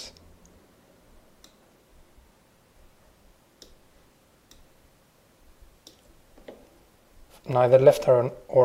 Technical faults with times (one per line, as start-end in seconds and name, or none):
6.32-7.53 CD scratch ticks